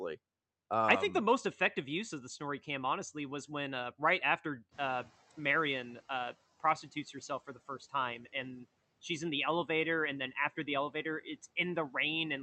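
Just after "when uh right after", the room noise jumps by about 15 dB near 4.5 s, and from 4.71 to 6.36 s the noise suppressor is catching up. Its noise estimate trails the rise, so the noise comes through with less reduction at first and then sinks steadily over about 1.65 s by about 12 dB. That gradual fade is what separates it from a gate snapping shut.

Between 7.47 and 7.94 s, after "prostitutes herself" and before "and she's in the", speech is cut by the noise suppressor. Short pieces totalling about a tenth of a second are pulled down as much as about 11 dB along with the background, so they sound swallowed.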